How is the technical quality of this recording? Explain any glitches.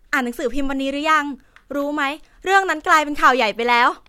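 Nothing in the recording registers as a technical fault, so there are no glitches to explain.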